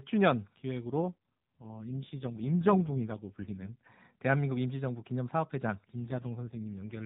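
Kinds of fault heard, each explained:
AMR rate drop: the mobile codec falls to a leaner mode, seemingly 12.2 down to 4.75 kbps, so speech from 0.85 to 3.77 s and from 6.00 s onward turns buzzy and synthetic; a spectrogram keeps the 4 kHz ceiling and the waveform shows no gap.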